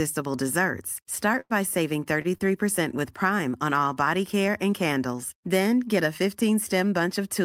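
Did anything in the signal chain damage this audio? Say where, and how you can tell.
Yes. At the network stage there is a burst of packet loss from 1.40 to 1.53 s. The receiver concealed it by repeating and fading the last sound for about 96 ms, so a held, decaying copy of that sound replaces the real audio and roughly 60 ms of speech is gone when it resumes. On a spectrogram the last sound runs flat and smeared, then dims, and cuts abruptly to unrelated content. The waveform shows a repeating, shrinking cycle.

Two short stalls from a late packet follow, at 2.22 to 2.28 s and 2.38 to 2.43 s. In each, the jitter buffer ran dry and the last sound was stretched for 27 ms and 21 ms respectively. Nothing is skipped, but the speech briefly hangs before continuing from the same point. A spectrogram shows short horizontal smears with no missing segment, and the waveform shows a brief periodic repetition.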